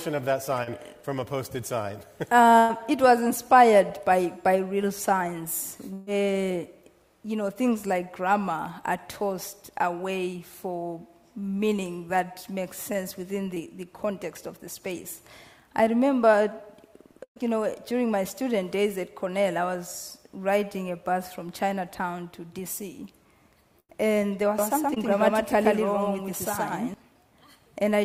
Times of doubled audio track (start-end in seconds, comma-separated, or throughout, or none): 24.58-26.94